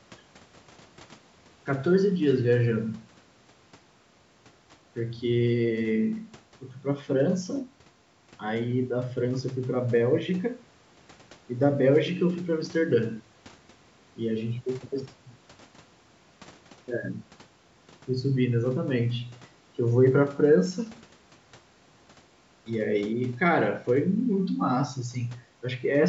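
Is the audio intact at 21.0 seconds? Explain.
Yes, the speech at 21.0 seconds is intact, having passed through ordinary call microphone processing that caps the sound at about 8 kHz and trims the lowest bass without introducing any fault there.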